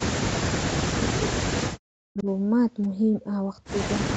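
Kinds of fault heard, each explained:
Speech suppressed in double talk: From 0.61 to 2.26 s the speech repeatedly sinks and breaks apart, losing about one and a half seconds in total, with the deepest dips falling roughly 40 dB so that parts nearly vanish. This is likely an echo canceller facing both ends talking at once. Unable to tell the local talker from the returning loudspeaker sound, it turned everything down, carving those gaps into the speech.
Echo leak: Between 2.18 and 2.23 s a faint, brief scrap of earlier speech surfaces, arriving 393 ms after the original and sitting roughly 25 dB beneath the live speech, a ghost of what was already said. This likely comes from one side playing the call over a loudspeaker, where the echo canceller missed a small portion of the sound its microphone recaptured and let that remnant travel back down the line.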